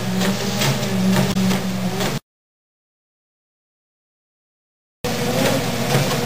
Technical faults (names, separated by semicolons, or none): damaged data in a compressed stream